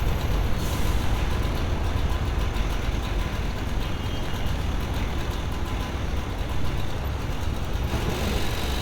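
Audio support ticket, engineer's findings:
No faults found on review.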